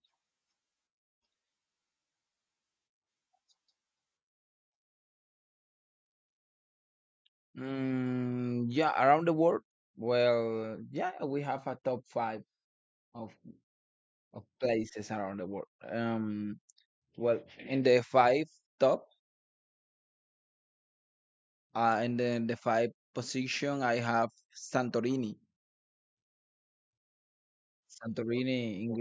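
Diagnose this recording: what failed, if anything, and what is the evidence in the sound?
Nothing in the signal chain has failed: the speech recording holds a continuous, stable signal with no audible disturbance at any stage from capture to playback.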